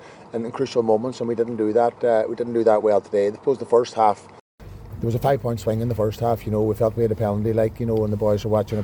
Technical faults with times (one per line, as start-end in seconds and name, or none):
0.00-4.60 input switched to a poorer device